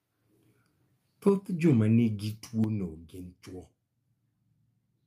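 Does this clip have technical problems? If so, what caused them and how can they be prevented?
Yes. From 1.27 to 1.29 s and again from 1.65 to 1.73 s, the loudest speech peaks turn harsh and crackly with flattened tops. This is likely microphone overload: input gain pushed peaks about 3 dB and about 1 dB past the converter's ceiling, clipping around a tenth of those samples in the first burst and a small share in the second. Setting the microphone's input level lower, with headroom for the loudest syllables, prevents it.

At 1.29 s, right after the first distorted burst, the speech and background drop suddenly by about 4 dB, and at 2.64 s they drop again by about 7 dB. The likely cause is a microphone volume step-down, where the call software reacts to the overly hot input by cutting device gain in single steps. Starting with a sensible input level, or disabling automatic gain adjustment, avoids these jumps.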